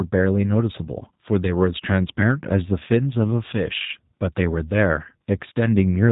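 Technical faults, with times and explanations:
Throughout, G.729 codec: the speech is rebuilt from a modelled vocal tract filter, a pitch predictor and a few pulses per short frame, giving a plainly rough, synthetic quality. Nothing passes above 3.8 kHz, which fits an 8 kbit/s coder.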